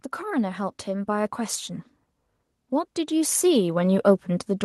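From 0.21 to 1.41 s the level climbs by about 5 dB, and from 2.69 s to the end it rises again: automatic gain rising both times. The gain control judged the input too quiet and turned itself up gradually, so the voice and the background swell together. On a waveform the envelope widens steadily across each span, noise floor included; on a spectrogram every frequency band brightens uniformly rather than any single band changing.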